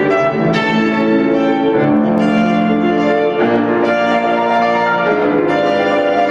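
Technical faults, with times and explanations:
Throughout, gain pumping. The gain swings by about 5 dB. Loud and quiet parts sit close together, so the sound is squashed. Input gain is likely far too high, with a fast limiter pulling it down.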